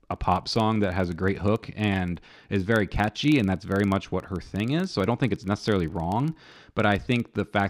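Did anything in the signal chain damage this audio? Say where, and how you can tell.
Yes. A filter restarted on every block in the processing stage. A steady 25 Hz buzz runs through the whole clip and follows the speech level. That rate fits 40 ms blocks. The filter loses its state each block, so every block starts with a small transient.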